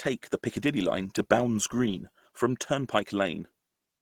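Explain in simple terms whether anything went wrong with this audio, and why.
Across the whole recording, from start to finish, the speech sounds muffled and hoarse, with a rough, grainy edge. The likely cause is Opus compression. Squeezed hard, the encoder switches to a speech-oriented mode that keeps the overall shape of each sound but discards fine detail.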